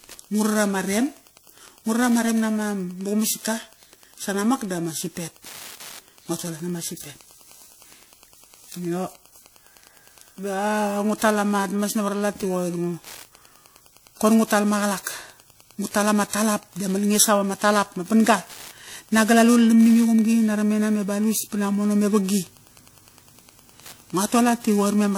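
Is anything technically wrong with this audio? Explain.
Yes. Three faults run through the whole speech clip.

Wi-Fi interference is present from start to finish. A nearby Wi-Fi radio's beacon, repeating every 102.4 ms, is being picked up and rectified by the audio circuitry, so its bursts become audible pulses. The result is a steady ticking at roughly ten per second, sitting about 30 dB below the speech.

Periodic clock jitter also affects the entire clip. The converter's sampling clock is being modulated by interference at a single rate of around 2 kHz. That timing wobble places sidebands above and below every component of the speech, spaced around 2 kHz from it, and the sidebands grow stronger for higher-frequency content. The audible effect is a rough, metallic edge on the speech that disappears whenever the speech stops.

The clip also carries plainly audible transform-codec damage throughout. 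Its character, with ringing and washy smearing and a hiss that rises and falls with the speech, points to WMA compression as the likely cause, at a bitrate around 48 kbps. Quantisation noise spreads in time around each sound, and weak spectral detail is discarded, which produces the smeared, breathing quality heard across the recording.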